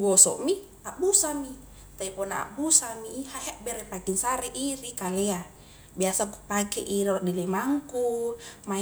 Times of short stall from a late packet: none

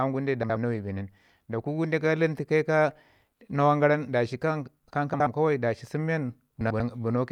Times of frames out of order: 0.43-0.56, 5.13-5.27, 6.61-6.80

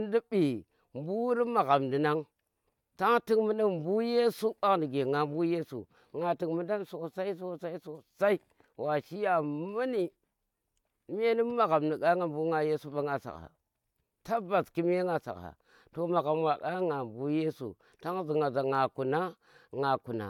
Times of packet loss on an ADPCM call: none

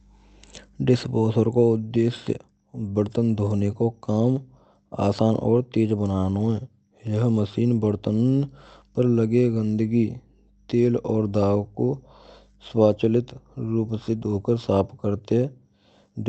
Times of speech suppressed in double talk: none

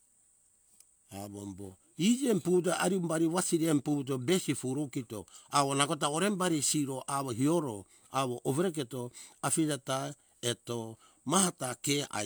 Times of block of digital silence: none

